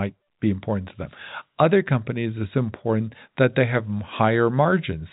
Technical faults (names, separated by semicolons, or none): none